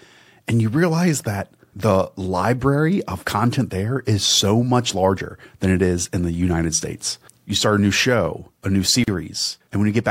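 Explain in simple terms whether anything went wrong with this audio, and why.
Just after "new show a new", the speech drops out for about 39 ms (9.04–9.08 s), a gap at a join of encoded pieces where the encoder's padding silence was left in.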